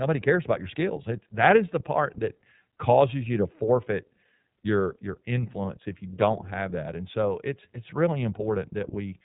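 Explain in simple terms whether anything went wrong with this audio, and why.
iLBC codec damage runs through the whole recording, from start to finish. This phone-style codec chops the speech into 30 ms slices and codes each one on its own, without borrowing from the slice before. It also discards everything above about 3.8 kHz, so the voice sounds narrow and muffled, like an old phone line. The slice-by-slice coding gives the speech a plainly audible rough, slightly synthetic edge.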